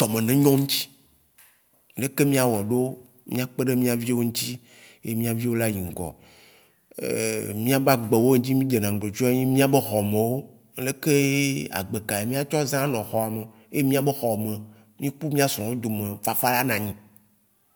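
No technical faults can be heard in this recording.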